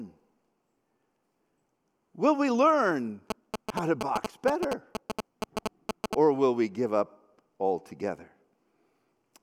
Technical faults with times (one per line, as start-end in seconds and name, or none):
3.30-6.15 GSM signalling bursts